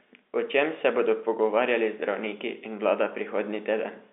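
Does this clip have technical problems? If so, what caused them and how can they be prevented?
No, nothing here needs fixing: it's ordinary telephone-line audio, so the sound tops out at about 3.8 kHz and has that familiar narrow phone character, which is simply how the line carries it.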